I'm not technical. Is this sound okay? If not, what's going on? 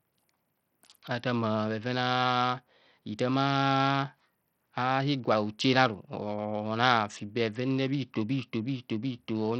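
No. All the way through, the speech has a gritty, grainy edge, and the crisp top end flickers in and out. That likely comes from Bluetooth SBC compression squeezed hard: the highest frequencies get almost no detail to work with, and the rest is rounded off roughly.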